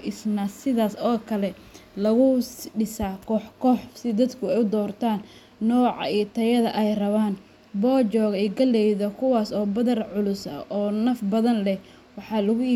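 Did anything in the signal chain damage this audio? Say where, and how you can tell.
No, nothing in the signal chain audibly damaged this speech recording. No stage, from wiring and conversion through to playback, leaves any mark that can be heard anywhere in the clip.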